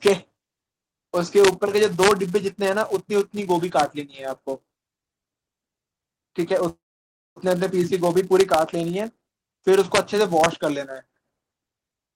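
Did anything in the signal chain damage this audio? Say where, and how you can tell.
Yes. Four separate faults can be heard, at different stages of the chain.

Throughout the clip, a filter is restarted on every block, most likely in the driver or buffer stage or in the processing chain. It produces a steady buzz at 188 Hz, which fits a 256-sample block at 48 kHz. Each block starts its filter from silence and so begins with a small transient. Mains hum would stay at a constant level, but this buzz rises and falls with the speech level.

Integer overflow damages peaks at 0.07 s, 1.45–1.48 s, 1.83–2.11 s, 3.79 s, 8.40–8.54 s, 9.95–9.98 s and 10.44 s. This points to a gain or sample-format conversion stage. There the peaks exceed the integer limit by only about 0 to 2 dB, yet they wrap to the opposite sign. Clipping would flatten those peaks. Here the waveform jumps across the full range, so the result is violent cracks, far harsher than clipping.

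A call audio freeze runs from 6.69 to 7.38 s. The last sound is extended and then decays, and about 0.58 s of the gap is silent. After that, the speech resumes exactly where it stopped, with nothing missing, and everything that follows is about 0.67 s later. The likely cause is packets delayed in the network, which emptied the jitter buffer. That sets it apart from packet loss, where audio would be missing.

A jitter buffer speed-up occurs from 12.06 to 12.15 s. The receiver trimmed about 70 ms of pitch-period pieces, so the sound runs at 188% speed while keeping its pitch, and it sounds hurried. Because the pitch stays the same, this is not a resampling or clock fault, which would raise the pitch as well. It is the buffer reducing excess delay in the call path.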